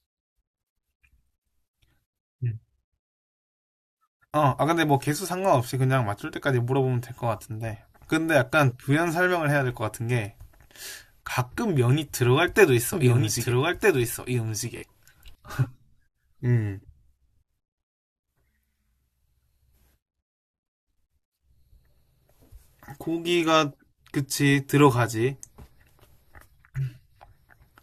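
Speech, with two faults in the middle stretch. From 12.93 to 15.35 s a doubled audio track appears, likely because the signal was picked up a second time along a slower path or an edit left a second copy out of step. The result is a full-band echo of the speech trailing about a second and a half behind, somewhat quieter at around 5 dB down, with no decay or room colour, starting and stopping abruptly. Inside that stretch, at 14.77 to 14.84 s, comes a Bluetooth stutter. Audio data arrived late or went missing, so the receiver kept replaying its last short buffer until fresh data reached it. That gives a brief mechanical buzz of repeated slices over about 46 ms of lost audio, which fits two dropped packets. When the sound resumes it has skipped ahead, as if it had kept playing underneath.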